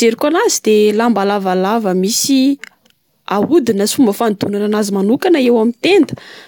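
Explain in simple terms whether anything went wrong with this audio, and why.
Nothing went wrong here.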